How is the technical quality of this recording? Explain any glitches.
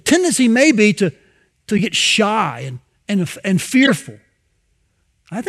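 Two short, harsh glitches interrupt the speech. At 1.77 s, just after "may be to to", and at 3.83 s, just after "and and and", a loud chirp-like burst lasts about 22 ms and 56 ms. Each is a corrupt frame decoded: flipped bits in a few compressed frames were played anyway, throwing strong energy onto the wrong frequencies.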